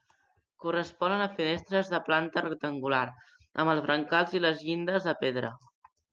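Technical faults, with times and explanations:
No technical faults can be heard in this speech clip. It has passed through a call codec, and the top end stops at about 12 kHz, which fits Opus set to that bandwidth.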